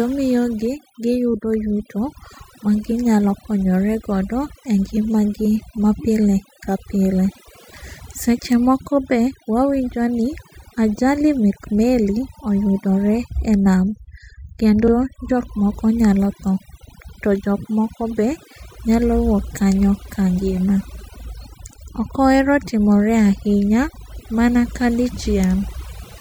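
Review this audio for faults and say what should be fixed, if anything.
Overdone noise removal affects the whole speech clip. Bands near the noise estimate are pulled down hard, leaving a lowered background that breaks up into twinkling specks. Prevent this by lowering the reduction amount and checking quiet passages before export.

Repeated frames occur at 14.86–14.91 s. A short stretch of compressed audio plays twice, causing a brief stutter and adding about 49 ms, with coding blocks of roughly 39 ms. Prevent this by fixing the write or transmission path so each frame is stored and sent exactly once.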